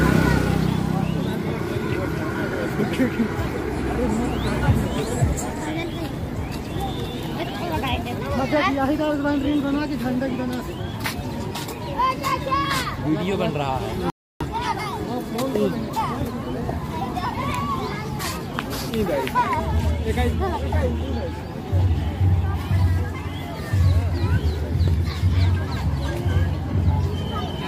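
At 14.1 s a rebuffering stall occurs: the player exhausts its downloaded audio, so the sound drops to silence for about 0.31 s, then resumes exactly where it stopped.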